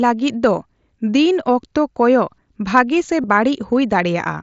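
Speech clip with one concealed Bluetooth headset packet loss from 3.22 to 3.24 s. About 22.5 ms of audio is replaced by a repeat of the preceding waveform, heard as a brief buzzy hold with a slight warble on resumption, consistent with three lost mSBC frames.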